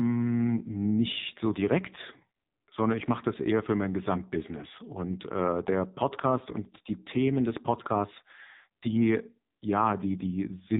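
AMR narrowband mobile codec damage runs through the whole of this speech clip, from start to finish. Everything above 4 kHz is missing, because the audio has passed through an 8 kHz telephone path, and the damage is heavy. The codec rebuilds speech from a vocal-tract model excited by a handful of pulses per 5 ms subframe. With so few bits, voiced sounds turn buzzy and synthetic, which fits a low AMR-NB mode around 5.9 kbps.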